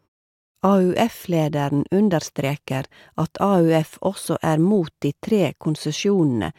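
Listening to the speech closely, nothing stood out as a technical fault at any point.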